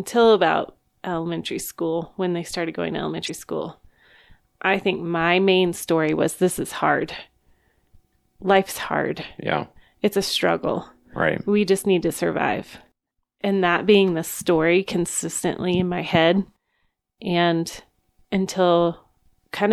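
At 3.26 s the speech is broken for about 40 ms, ending by 3.30 s, by a brief burst of garbled sound or a short gap. This is damaged data in a compressed stream: some bytes in that stretch of the encoded file were lost, zeroed or overwritten. The decoder could not read those frames properly, lost sync, and had to hunt for the next valid frame header before normal decoding resumed.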